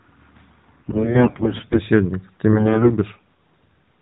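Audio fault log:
0.78–1.81 s and 2.52–2.91 s: AMR bit errors. The speech keeps roughly its pitch and loudness but goes hoarse, scratchy and a bit gargly in both stretches, worse in the first one. What's going on is that the less protected bits of the AMR frames got flipped on a shaky link while the check on the core bits still passed. So the excitation pulses land in the wrong spots and the fine pitch, gain and spectral values drift. The first burst sounds like a fairly heavy error rate, around a fifth of bits, and the second roughly half that. Underneath it all you can hear the narrowband mobile codec doing its usual job, with nothing above 4 kHz.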